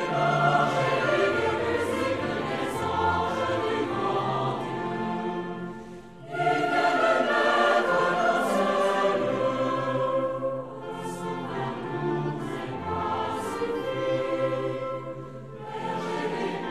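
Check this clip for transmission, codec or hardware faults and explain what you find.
Nothing stands out here: I listened all the way through and didn't hear anything that points to a transmission, codec or hardware problem.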